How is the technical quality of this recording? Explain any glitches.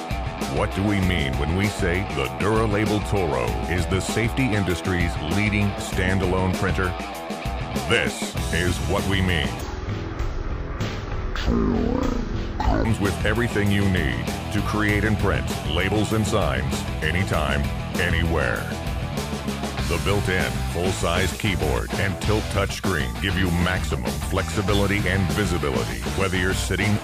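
The recording has one clear glitch. Stereo read as mono, from 9.61 to 12.85 s: the left and right samples are taken one after another as a single channel, so the sound drops to half speed and an octave low, with a fainter mirrored copy in the upper spectrum.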